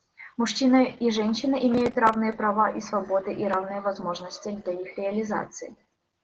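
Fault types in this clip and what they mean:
Opus voice compression: The speech went through Opus in its SILK linear-prediction mode at a low bitrate, which sounds consistent with roughly 12 kbps. The band is held to wideband, so there is nothing above 9 kHz, and the excitation is coded coarsely. Throughout the clip the speech sounds muffled and lacks air, with a hoarse, slightly robotic graininess. The codec damage is plainly audible rather than subtle.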